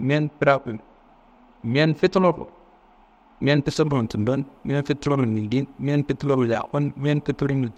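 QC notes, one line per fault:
0.00 to 3.67 s, channel delay (comb filtering): one channel arrives roughly two samples late, around a twentieth of a millisecond, and the pair is folded to mono, so content common to both cancels at evenly spaced frequencies. With an offset this tiny, the first notch sits up near 10 kHz, so the speech loses air and crispness in the top octave and sounds slightly dull rather than obviously hollow.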